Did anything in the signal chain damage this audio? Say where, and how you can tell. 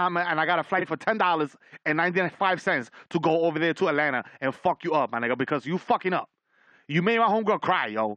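Yes. At the network or codec stage, frames arrived out of order at 0.78–0.85 s, after "and I got a": two 23 ms blocks played swapped, causing a garbled flutter.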